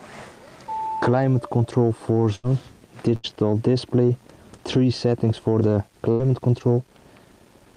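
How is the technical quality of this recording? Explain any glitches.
Three bursts of packet loss break up the recording, at 2.35, 3.15 and 6.11 s. Each time, a run of packets never arrived, so the receiver stretched the last sound for about 80 ms as a fading buzz or hiss, then skipped about 80 ms of audio.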